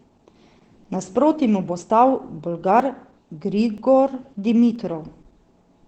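Opus compression, likely the cause of the damage heard from start to finish, leaves the speech muffled and hoarse, with nothing above about 8.4 kHz. That narrowed band and the rough, veiled texture point to the codec dropping into its SILK speech mode, which fits a low rate of around 12 kbps. At that rate the encoder models the voice rather than keeping every band's detail, so consonants lose their crispness and the sound turns coarse and boxy.

Audio missing between chunks then produces short skips at 0.84, 1.82 (right after "mu bo"), 2.80, 3.78 and 4.76 s, spaced almost exactly 1 s apart. The recorder likely handles the signal in one-second chunks and drops about 20 ms at each handover. The two sides are butted together with no gap, so the speech jumps forward abruptly at each seam.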